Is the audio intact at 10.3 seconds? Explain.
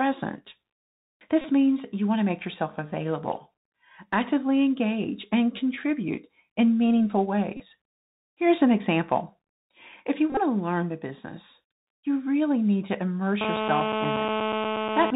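No. A Bluetooth headset packet repeat hits from 10.30 to 10.40 s, just after "if you". Voice packets between headset and phone went missing, and the chip replayed the previous packet's bits in their place. About 56 ms of audio is lost, scattered across roughly 68 ms. The longest unbroken stretch is about 20 ms. Where repeats run back to back, the 3.75 ms replay period turns into a steady buzz near 267 Hz until clean packets resume.

Underneath, the Bluetooth CVSD headset codec runs through the whole clip, so this moment is narrowband too. CVSD sends one bit per sample at 64 kHz, saying only up or down, with an adapting step size. Nothing above 4 kHz gets through. Sudden loud high content outpaces the step and distorts. S sounds come out scratchy, and a granular hiss sits beneath the speech, plainly audible here.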